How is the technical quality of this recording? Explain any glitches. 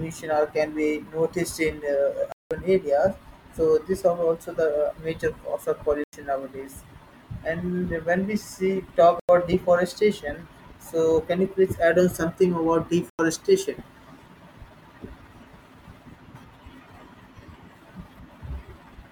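The speech has four dropouts, each a block of digital silence. The first runs 2.32–2.51 s (about 186 ms), and shorter 93 ms holes follow at 6.04, 9.20 and 13.10 s. Buffers left unfilled in time were likely zeroed. That fits 4096-sample blocks at 44.1 kHz, with the first gap two blocks long. Each gap is heard as a short hole. On a waveform it is a dead-flat line. On a spectrogram it is a blank vertical band.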